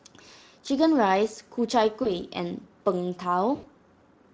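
At 2.03 s and again at 3.55 s the speech breaks up with VoIP packet loss concealed by the speech codec. With packets missing, the decoder extends its last pitch and filter while turning the gain down. The first gap, about 20 ms, fits one lost frame. The second, about 80 ms, fits several. Each is heard as a short stretched sound that fades, and the weakness lingers to 2.11 s and 3.66 s. A spectrogram shows frozen, evenly spaced harmonics decaying in level, and the waveform shows repeating cycles that shrink.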